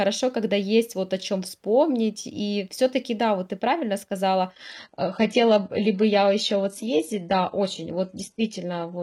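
At 4.52 s, after "вот ты правильно сказала", the adaptive stream switches to a lower bitrate until the end. Everything above 11.8 kHz vanishes abruptly and codec artefacts rise, with no gap.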